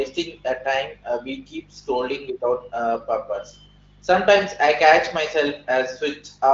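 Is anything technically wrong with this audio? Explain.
No, nothing's wrong here; it's a speech recording carried through the AMR wideband (HD Voice) codec at a rate high enough to keep it clear, so the top end simply stops at about 7.3 kHz the way that codec is built to.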